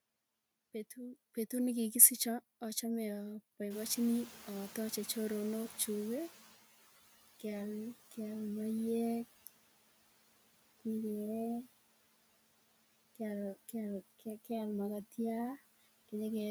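A speech recording carries noise suppressor artifacts from start to finish. The suppressor pulls the steady background down by about 17 dB between phrases and lets it back up under the speech. On a spectrogram the gaps show patchy, blotchy low-level energy. Around 3.5 s the room noise jumps by about 16 dB, settling about 19 dB below the speech. From 3.7 to 6.58 s the noise suppressor is catching up: its estimate of the noise lags, so the louder noise passes with little reduction and then sinks by about 12 dB as the estimate adapts over 2.88 s. A waveform or spectrogram shows the noise floor stepping up and then tapering down across that stretch.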